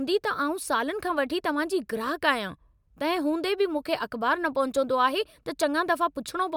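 A recording of speech in which no technical faults can be heard anywhere in the signal.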